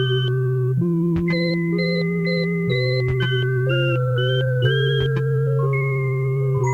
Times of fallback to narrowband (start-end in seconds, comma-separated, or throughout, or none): none